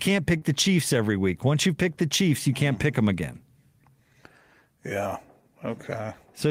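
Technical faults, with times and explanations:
0.37 to 0.43 s, short concealed packet loss: about 40 ms of the speech stream failed to arrive at the decoder in time, and the receiver covered the gap with 40 ms of synthesised fill, extending the preceding sound from its pitch if voiced or as shaped noise if not, before crossfading back into the received audio. The result is a brief smear or wobble early in the clip, where a short consonant could be lost.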